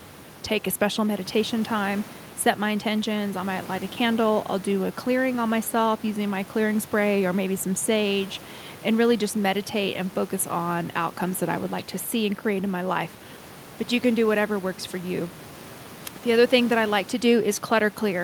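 Speech recording with no technical faults to report.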